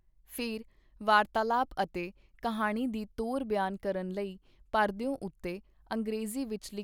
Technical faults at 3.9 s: none

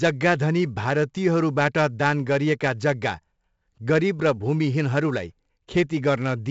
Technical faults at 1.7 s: 4-bit ADPCM compression

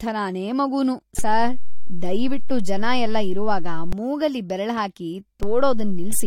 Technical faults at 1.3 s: low-bitrate audio saved at a high bitrate; DC step

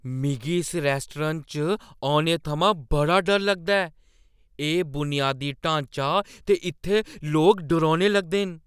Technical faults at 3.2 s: none

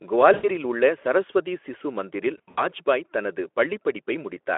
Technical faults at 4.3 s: none

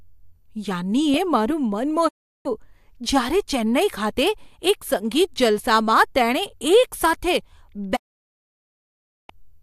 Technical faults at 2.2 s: digital broadcast dropout

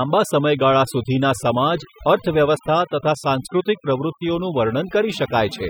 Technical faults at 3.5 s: overdone noise removal

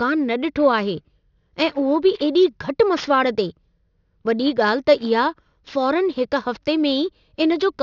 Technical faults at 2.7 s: aliasing

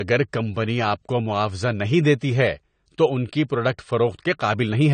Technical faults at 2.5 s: low-bitrate audio saved at a high bitrate

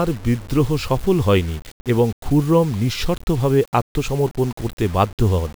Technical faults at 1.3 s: low bit depth without dither

